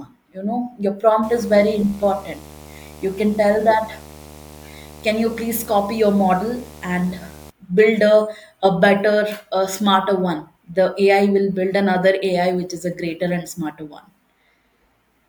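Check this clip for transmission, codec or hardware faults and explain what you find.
One fault is present. From 1.23 to 7.5 s, right after "you know your", a 75 Hz buzz with hiss-like hash sits roughly 20 dB under the speech. This is video or display buzz: a screen or video cable coupling its field-rate interference into the audio path.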